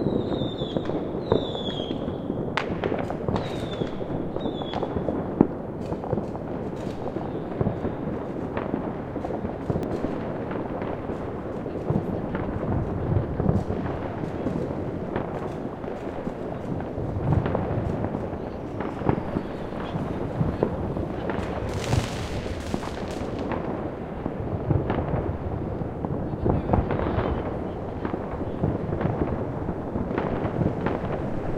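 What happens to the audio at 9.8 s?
At 9.83 s the sound jumps forward slightly. No gap of silence is heard; the two sides simply butt together. Only a tiny slice goes missing, around a millisecond or two. The likely cause is a dropped buffer (overrun). The software did not fetch the incoming samples in time, so the hardware wrote over them. The lost piece vanishes and the stream splices across it, which produces the abrupt jump.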